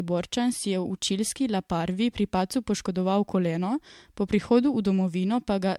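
Throughout the speech the sound is swirly, smeared and hollow, with blurred consonant attacks, more degraded than a single MP3 pass near 100 kbit/s would leave. This points to generation loss, likely from about seven MP3 re-encodes, each requantising on a shifted frame grid and compounding noise and spectral holes.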